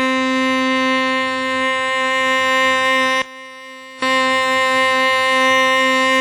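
From start to finish the music sounds washy and ringing, with a hiss that swells and shrinks with the signal. Nothing is heard above 19.4 kHz, and the damage is heavy. This is likely WMA compression: a transform codec working in long blocks smears its quantisation noise over tens of milliseconds around each sound and discards weak detail. The degree of damage points to a low bitrate of about 32 kbps with an early, simple encoder.

Between 3.22 and 4.02 s the music abruptly drops by about 21 dB, with the centred body of the mix almost gone and only a faint residue left. Then it returns at full strength. This sounds like one channel inverted, likely a polarity flip on one side. When the two channels are summed to mono, everything they share cancels, leaving just the small difference between them.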